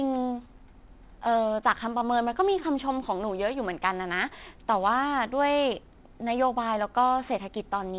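A speech recording with aliasing throughout. Sibilants sound gritty and metallic. Content above 4 kHz folds back below that edge, which fits a resample to 8 kHz without filtering. The folded tones sit roughly 25 dB under the speech.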